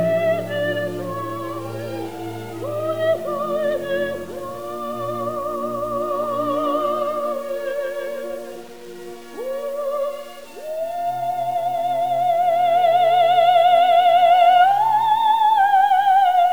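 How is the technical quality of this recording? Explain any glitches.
The technical quality is poor because of one fault present for the whole recording. Throughout, grainy distortion tracks the sound; this is likely low bit depth without dither, truncated to 7 bits, leaving error roughly 30 dB below the signal.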